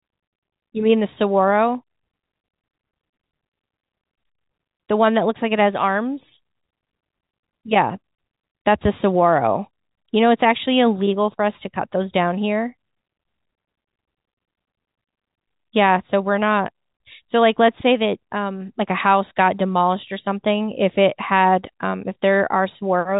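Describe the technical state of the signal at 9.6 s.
At 9.6 s the audio is intact, with only the narrow telephone band of G.711 coding, which carries nothing above about 3.8 kHz.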